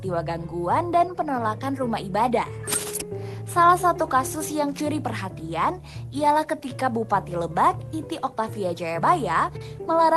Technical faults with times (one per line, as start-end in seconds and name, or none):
0.00-10.16 clock drift between sender and receiver
0.27-10.06 repeated timing corrections